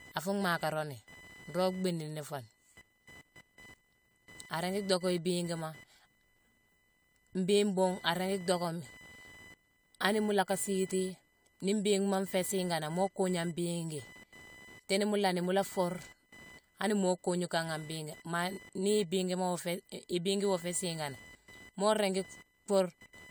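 Processor and peripheral load shifting the shared ground under the audio circuit puts computer activity noise across this speech recording: a buzzy, chirping whine near 1 kHz, roughly 25 dB below the voice, throughout.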